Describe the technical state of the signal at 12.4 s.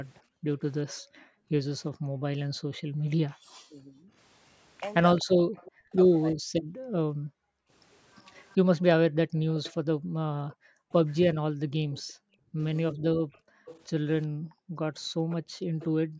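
At 12.4 s the signal carries two faults. The background is gated by the echo canceller across 6.66 to 16.19 s: while the far-end loudspeaker plays, the canceller clamps the microphone down hard, so the room sound dips by up to about 40 dB, around five seconds in total, and recovers when suppression releases.

Overlapping that, from 11.71 to 15.86 s, a delayed copy of the speech trails the original by 381 ms, roughly 20 dB below it. This is likely an echo leak, where the loudspeaker side's canceller failed to remove everything its microphone picked up, so the remnant was sent back.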